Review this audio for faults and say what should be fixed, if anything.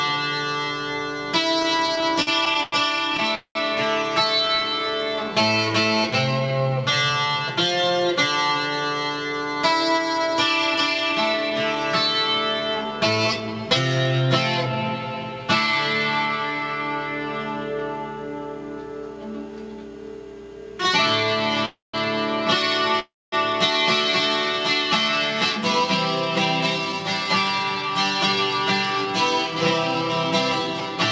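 Repeated stalls (stutter) from 1.60 to 4.79 s: about twenty brief holds, the longest 92 ms, where the audio sustains its last sound because packets arrived too slowly.

Call audio freeze at 3.35 s (0.22 s), 21.65 s (0.28 s) and 23.00 s (0.33 s): each hold fades into roughly 100, 180 and 230 ms of silence, likely from packets delayed in transit, before the audio resumes where it stopped.

Jitter buffer slow-down from 4.44 to 7.33 s: playback runs at 92% speed with unchanged pitch, stretching out about 0.25 s as repeated pitch periods rebuild the buffer's reserve.

Jitter buffer speed-up from 9.10 to 14.73 s and from 26.78 to 30.97 s: playback hurries to 106% and then 105% at the same pitch. Trimmed pitch periods remove roughly 0.4 s and 0.2 s of excess buffered delay.

The band stops at 8 kHz throughout, which fits a wideband call codec at 64 kbps.

To prevent these faults, stabilise network delay with QoS prioritisation or a less congested route, and give the jitter buffer a steadier, slightly larger target.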